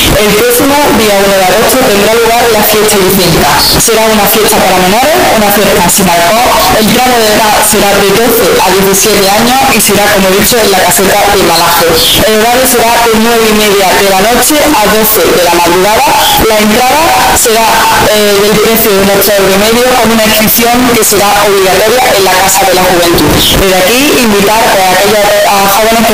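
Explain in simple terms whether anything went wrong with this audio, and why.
Something went wrong for the whole clip, from 0 to 26 seconds. The sound is very loud and harsh throughout. Quiet background noise comes out as loud as the main sound. This is a float read as integer fault. The audio was likely saved as 32-bit floating-point numbers but played back as 32-bit whole numbers. Each sample's sign and exponent then set its level. So the wave turns almost square, at an almost fixed, high level.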